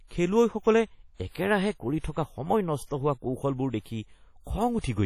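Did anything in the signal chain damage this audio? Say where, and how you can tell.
Yes, at the codec stage: the speech rings and smears throughout, with hiss breathing alongside the signal, likely heavy WMA compression at a low bitrate near 32 kbps.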